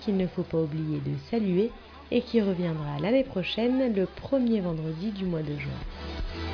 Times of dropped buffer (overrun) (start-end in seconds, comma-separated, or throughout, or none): none